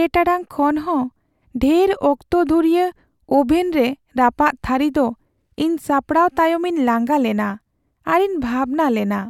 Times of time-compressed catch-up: none

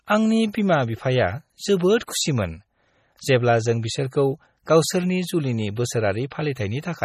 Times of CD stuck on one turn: none

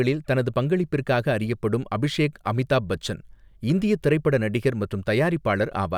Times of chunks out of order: none

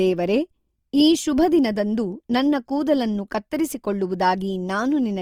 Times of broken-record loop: none

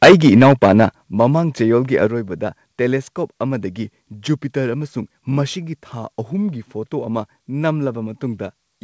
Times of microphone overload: 0.02-0.86

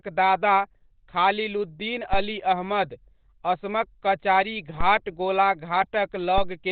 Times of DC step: 2.13-4.81

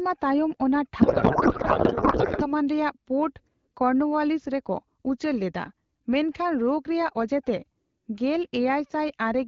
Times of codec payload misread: 1.01-2.53

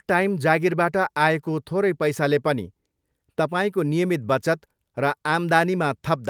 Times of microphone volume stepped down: none

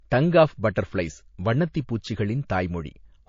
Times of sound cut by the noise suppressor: none

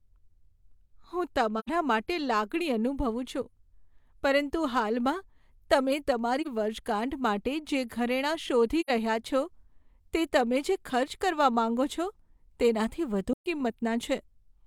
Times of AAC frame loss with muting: 1.59-1.69, 6.41-6.47, 8.80-8.90, 13.32-13.46

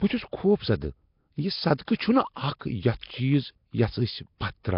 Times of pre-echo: 1.85-1.88, 3.01-3.03

